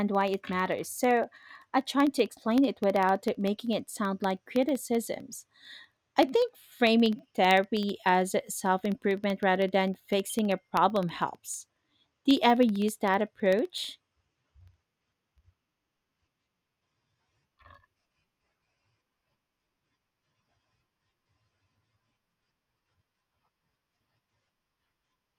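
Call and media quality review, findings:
Periodic USB or driver dropouts, 0.08–25.3 s: a background task stalls the USB bus or audio driver every 64 ms, and each stall drops a fraction of a millisecond of samples, replaced by silence. Symptom: a steady tick train of about 15.6 per second, hundreds in all, audible only while speech is present and gone in pauses. Probable component: USB host controller or audio driver scheduling.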